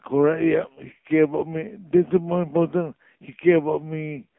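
From start to finish the speech carries the signature of the AMR narrowband mobile codec. The audio sits in a telephone band of roughly 150 Hz to 3.5 kHz, with nothing above 3.6 kHz, so sibilants and breath detail are gone. The codec rebuilds the voice from a vocal-tract model and a sparse pulse excitation every few milliseconds. Here the damage is heavy, leaving a buzzy, synthetic quality that fits one of the lower AMR-NB modes, around 6.7 kbps.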